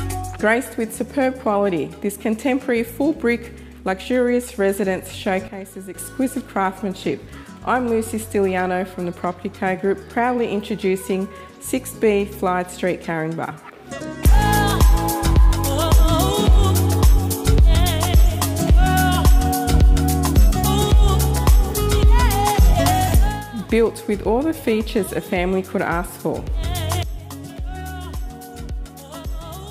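At 5.48 s the sound and its background noise drop together by about 10 dB, recovering at 5.94 s; from 27.03 s to the end they fall about 16 dB at once. This is a sudden gain jump, likely a level change applied between samples without any ramp.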